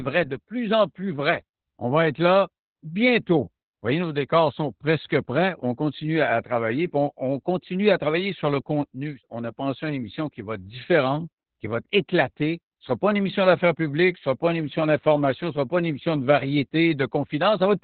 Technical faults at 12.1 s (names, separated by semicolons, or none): Opus voice compression